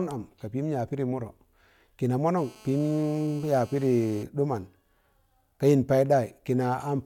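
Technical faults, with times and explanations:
2.37–4.23 s, GSM phone buzz. A hard, raspy buzz at 217 Hz with many harmonics sits under the speech, about 26 dB below it. It stays steady, as in a call. A nearby 2G phone transmits in bursts, and the audio circuit rectifies them into sound.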